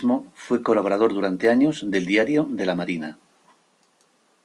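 Sharp single clicks at 1.45 s and 2.78 s in the speech, most likely dropped samples, where a fraction of a millisecond goes missing and the waveform jumps abruptly.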